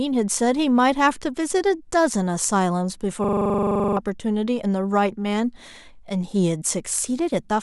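Speech, with a rapid machine-gun stutter from 3.24 to 3.97 s as a 42.7 ms fragment repeats at 23.4 Hz: a system hang loop, where the sound hardware kept cycling a frozen buffer, which fits a 2048-sample buffer, losing roughly 0.7 s of audio.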